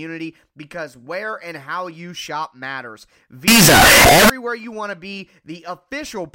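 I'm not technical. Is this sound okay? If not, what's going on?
No. From 3.48 to 4.30 s, after "how you shop matters" and before "you want to be", the speech becomes a harsh, very loud roar, even in quiet parts. This is likely signed and unsigned samples mixed up, which flips each sample's top bit.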